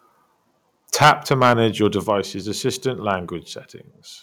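From 1.01 to 1.53 s the speech has a harsh, crackly edge on its loudest syllables, which sounds like microphone overload: the input is likely running about 14 dB too hot, so a fair slice of the peaks get flattened against the converter's ceiling. At 1.03 s there's a small drop of about 2 dB, likely the microphone volume being stepped down by the call software in reaction. A second, milder overload shows up from 1.84 to 2.10 s, just touching the limit and clipping only the odd peak, and at 2.04 s the level steps down again, this time by about 5 dB.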